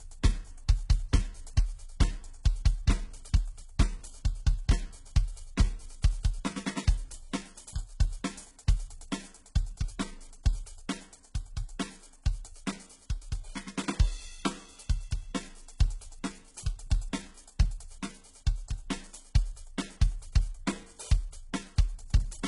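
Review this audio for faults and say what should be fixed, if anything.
The treble sounds gritty and metallic throughout, stopping near 11.1 kHz, likely HE-AAC compression faking the top end from copied lower bands at a very low bitrate. Encoding at a higher bitrate lets the treble be coded properly instead of rebuilt.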